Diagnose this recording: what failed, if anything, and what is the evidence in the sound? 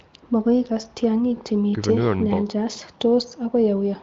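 Nothing failed in this recording, and the sound carries no evidence of a fault, only the expected absence of content above about 7.4 kHz from its AMR wideband (HD Voice) coding at 23.05 kbit/s.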